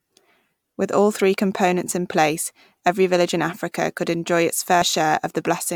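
At 4.82 s, just after "could enjoy its", compressed frames are skipped. About one frame, roughly 30 ms, goes missing, so the audio jumps ahead at the join. On a spectrogram this shows as a thin vertical seam where the content jumps abruptly.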